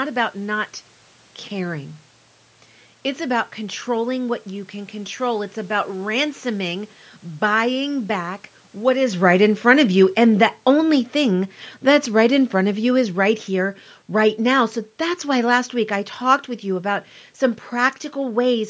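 From 7.51 s to 16.5 s, just before "with you about some", automatic gain falling lowers the level by about 9 dB. The gain control judged the input too loud or its background noise too strong and eased down, so speech and room noise sink together, unlike the talker's movement near 9 s. On the waveform the envelope tapers steadily, and the spectrogram dims evenly across all bands.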